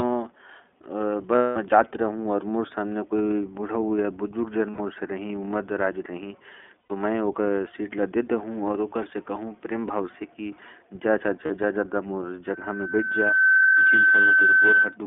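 The whole clip of speech passes through the iLBC codec. The line is narrowband, running from about 250 Hz to 3.5 kHz, so the voice sounds thin and boxed-in. The coding damage is plainly audible. Each 20 ms frame is coded on its own, and the result is a rough, slightly synthetic timbre that fits the 15.2 kbps iLBC mode.

Lost iLBC frames cause four dropouts. The first runs from 1.36 to 1.57 s and lasts 200 ms. The second, from 4.71 to 4.80 s, lasts 80 ms. The third, from 6.80 to 6.92 s, lasts 100 ms. The shortest, from 11.46 to 11.51 s, lasts 40 ms. In each gap the decoder repeats the last pitch cycle mixed with noise. That fills the hole with a held, buzzy vowel. The long first gap fades as it goes. The voice returns cleanly right after each one.

A loudspeaker feedback squeal starts at 12.50 s and runs to 14.97 s. Sound from the loudspeaker reaches the microphone again, and at 1.5 kHz the loop gain climbs past one. 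That tone grows on its own over about a second. It then settles as a steady squeal, roughly 5 dB above the speech, and it covers the voice until the clip nearly ends.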